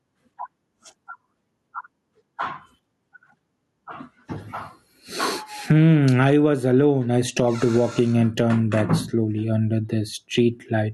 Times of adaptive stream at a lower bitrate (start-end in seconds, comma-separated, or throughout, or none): none